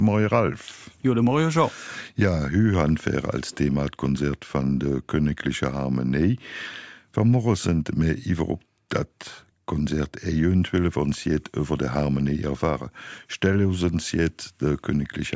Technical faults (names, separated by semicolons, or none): none